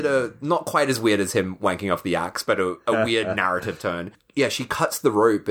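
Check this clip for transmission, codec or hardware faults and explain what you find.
Nothing in the speech points to a fault of any kind. Listening through, there is no disturbance to account for.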